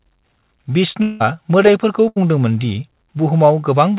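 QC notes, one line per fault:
1.02–1.22 s, long network dropout (likely cause): about 180 ms of speech is missing. The receiver carried the last sound forward as a fading buzz or hiss across the whole gap, with no dead silence, and speech resumes later with that stretch gone.
2.08–2.18 s, burst of packet loss: about 80 ms of speech never played. Concealment extended the preceding sound as a decaying held buzz or hiss. When audio resumes, the skipped section is absent, heard through the 4 kHz band limit of the G.711 A-law path.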